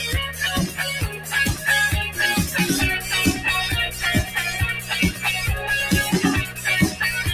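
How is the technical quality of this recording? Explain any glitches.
The recording is compromised by a speech-oriented noise suppressor that misreads the sound as noise.

Noise suppressor applied to music or sounds, throughout: treating steady tones and tails as noise, it swings gain by roughly 10 dB, so sustained material pumps and thins.

Sound cut by the noise suppressor, 1.05–1.33 s and 6.46–6.66 s: judged as noise, these passages drop by about 8 dB and about 9 dB respectively, sinking audibly.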